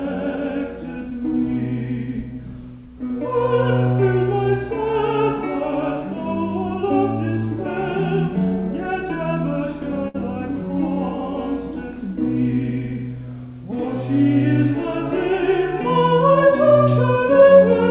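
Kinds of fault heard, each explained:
Burst of packet loss: a short run of packets arrived too late or not at all, so the receiver stretched and faded the last sound for about 60 ms from 10.08 s to 10.16 s, then resumed with about 60 ms skipped.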